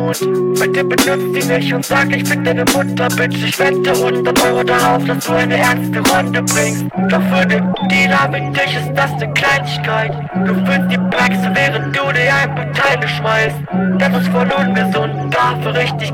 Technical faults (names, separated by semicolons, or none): hard clipping